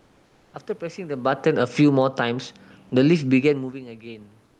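From 0.00 to 0.53 s the background is replaced by comfort noise: a steady, featureless hiss about 2 dB quieter than the real room sound, likely from Opus discontinuous transmission. Unlike a noise gate, the pause is filled rather than silent. Between 1.21 and 2.24 s the automatic gain falls by about 8 dB, so speech and room noise sink together. A talker leaning away would lower only the voice. From 2.15 to 3.50 s the automatic gain rises about 4 dB, and voice and background swell together over more than a second rather than the voice alone changing. Comfort noise returns from 4.45 s to the end, about 3 dB below the real background and smooth where the room sound had texture.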